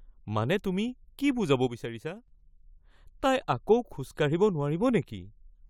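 At 1.67 s, just after "মানে তুমি কি বুজাব", a sudden gain jump drops the level by about 8 dB, and it stays there until 2.28 s, when it snaps back. The likely cause is a digital gain setting applied without a ramp. The speech and the background noise fall together, instantly, which sets it apart from compressor ducking or a fade. Those change level gradually and usually leave the noise floor behaving differently from the speech.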